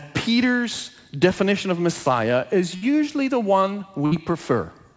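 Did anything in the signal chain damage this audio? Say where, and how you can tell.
Yes, the damage happens in the network stage of the call: a burst of packet loss, twice. At 2.76 to 2.84 s, just before "the one", and again at 4.06 to 4.13 s, just after "the one", the sound freezes into a short held, fading continuation of about 58 ms, and then resumes with roughly 60 ms of audio skipped. Unlike a buffer underrun or hard dropout, there is no dead silence: the receiver's concealment extrapolated the last sound, all within the G.722 call path's 8 kHz band.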